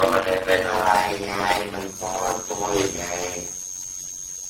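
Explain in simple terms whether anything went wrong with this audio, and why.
Two things went wrong, and both last for the whole clip of speech.

The first is a block size mismatch, with padding. One stage of the chain handed over chunks of about 256 samples, but the next stage expected bigger chunks, which fits a 480-sample block. It filled the missing part of each chunk with silence. Those tiny gaps repeat about 92 times a second, which is heard as a steady buzz. The speech also runs at about half speed (0.53 times normal) while keeping roughly its normal pitch. A slowed-down tape would drop in pitch, and that is not what happens here.

The second is generation loss. The sound was likely squeezed and unpacked by a lossy codec over and over, around seven times. Each pass threw away a little more detail and added a little more noise, so the speech sounds swirly, hollow and smeared, and sharp starts of sounds are blurred. 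Nothing is left above about 16.6 kHz. A single low-quality encoding would sound dull, but it would not have this built-up, watery smearing.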